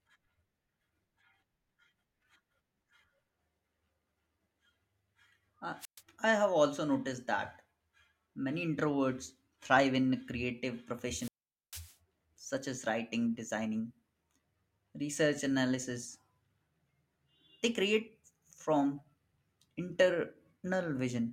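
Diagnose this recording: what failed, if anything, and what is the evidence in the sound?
A wireless microphone squelch dropout occurred in the analogue radio link, before conversion. At 5.79 to 6.02 s and 11.09 to 11.95 s, hiss rises, then the speech drops to near silence for 0.12 s and 0.45 s. The fading FM signal tripped the receiver's squelch, muting the output.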